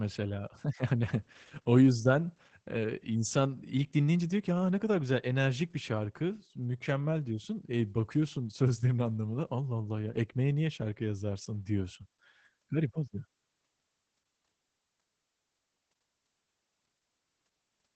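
Opus voice compression runs through the whole speech clip: the linear-prediction coder, narrowed to wideband, leaves nothing above 8.7 kHz and codes the excitation coarsely, which fits a low bitrate near 12 kbps. The voice sounds muffled, hoarse and faintly robotic. A spectrogram shows a flat ceiling and smeared harmonics.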